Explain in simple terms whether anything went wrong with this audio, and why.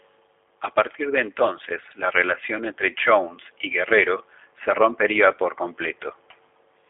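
The speech has been through a G.729 codec, a low-rate internet phone codec, and the damage is plainly audible from start to end. It keeps only sound between about 250 Hz and 3.5 kHz, so the voice is thin and boxy, like a phone call. Unlike simple phone-line filtering, G.729 rebuilds the voice from a rough model, adding a slightly buzzy, synthetic roughness to every syllable.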